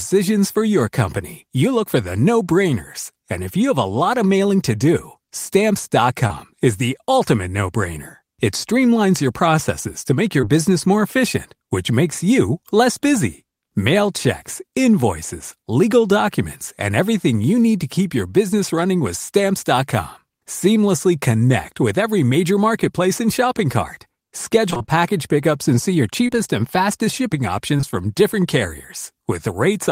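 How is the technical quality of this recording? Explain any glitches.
The recording is marred by packet-loss glitches in two forms.

Short concealed packet loss occurs at 6.27–6.31 s, at 10.41–10.44 s (between "your processes to make" and "business more efficient which"), at 26.27–26.41 s, at 26.30–26.33 s (between "pickups and see your" and "and fastest shipping"), and at 27.77–27.81 s and 27.81–27.85 s. Each time about 20 ms failed to arrive, and the decoder extended the preceding sound to cover it, adding roughly 15 ms of stretch at 26.27 s. You hear a brief smear or wobble. On a spectrogram it shows as a thin blurred column, and on the waveform as a small, oddly smooth stretch.

Repeated packet loss (robotic sound) runs from 24.70 to 24.95 s, just before "pickups and see your". Five gaps, the longest 25 ms, were patched in quick succession, so half that span is synthetic and sounds choppy. 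A spectrogram shows a striped, smeared band there.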